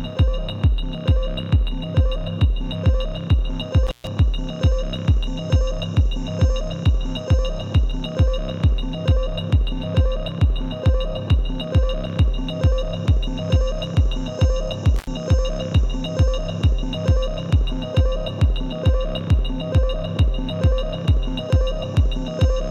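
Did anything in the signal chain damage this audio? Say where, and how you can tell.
Yes, an intermittent contact in the analogue wiring: the sound drops out with crackly edges around 3.87–4.07 s (open roughly 128 ms) and 14.96–15.07 s (about 79 ms).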